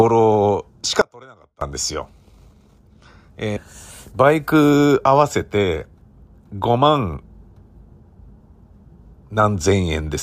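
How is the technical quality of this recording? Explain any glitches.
The speech has two glitches, both short.

From 1.01 s to 1.61 s there is an audio dropout to a faint residue. The speech cuts out abruptly for about 0.6 s and returns just as suddenly. The gap holds only a faint trace of the signal, roughly 25 dB below its normal level. The likely cause is a break in the wanted signal while the path after the interruption stayed live, so a low leak of the audio still got through. The hard edges on both sides make it sound like a fault rather than a natural pause or fade.

Between 3.56 s and 3.61 s there is a stream segment skipped. The speech jumps forward mid-flow with a small blip at the join, and a stretch of the programme is simply missing rather than silenced. This likely comes from a segmented stream where one segment failed to load and the player carried on with the next. The listener hears a discontinuity in the speech with no gap to mark it.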